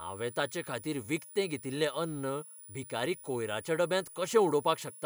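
It's a speech clip with a switching supply whistle running the whole way through: a thin tone near 10.2 to 10.3 kHz, wandering slightly in pitch, sitting roughly 20 dB under the speech. That's a switching power supply running in burst mode or beating with another supply, leaking into the audio path.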